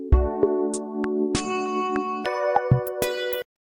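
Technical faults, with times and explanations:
2.25–3.69 s, section at the wrong speed: From 2.25 s to the end, the sound suddenly runs at twice its proper speed. Timing and pitch shift together, so everything turns hurried and high, raised by roughly ten semitones. The change is abrupt, with no gradual ramp. Pitch and tempo moving as one points to playback at the wrong rate. The likely cause is this stretch being played or rendered against the wrong clock.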